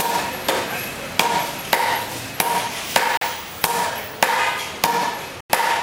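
A likely Bluetooth stall, where delayed wireless packets let the playback buffer run empty, cuts the sound to silence twice: for 41 ms at 3.17 s to 3.22 s, then for 92 ms at 5.41 s to 5.50 s, before it resumes.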